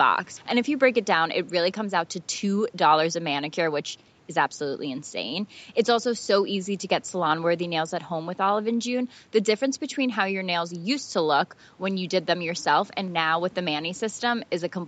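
No faults in the speech: the call path tops out at about 8 kHz as expected for its settings, and the room noise sits about 34 dB below the voice.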